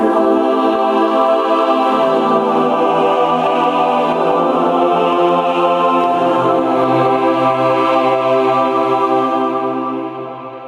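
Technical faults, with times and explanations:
Throughout, gain pumping: the gain ducks by about 15 dB under each loud sound, squashing loud and soft parts closer. This is likely from gain set far too high driving a fast limiter.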